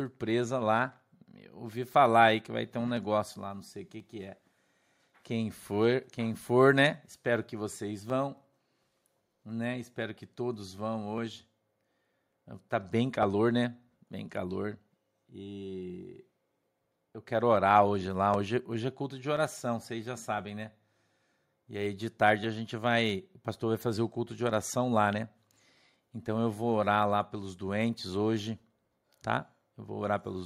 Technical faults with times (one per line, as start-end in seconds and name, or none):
0.92-29.61 periodic USB or driver dropouts